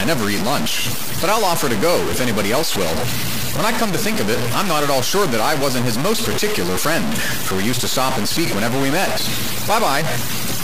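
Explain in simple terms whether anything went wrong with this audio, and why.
Something went wrong for the whole clip. The speech sounds grainy and harsh, the roughness rising and falling with the voice, and the softest moments drop out or sputter. The likely cause is low bit depth without dither, which fits audio stored with just 3 bits and simply chopped down, so the error follows the voice.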